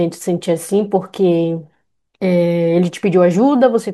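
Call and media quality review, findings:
No audible fault found in the speech signal; level, continuity and timing hold steady throughout the clip.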